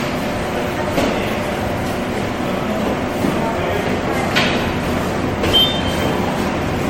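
Across the whole clip the sounds carry a swirling, smeared, hollow quality, with transients that blur instead of snapping, and nothing above 16.5 kHz. This is most likely generation loss: the audio decoded and re-encoded as MP3 around seven times, which fits a 64 kbit/s chain. A single encode at that rate would leave some artefacts, but each pass requantises on a shifted frame grid, so the noise and spectral holes compound into far more churning and dullness.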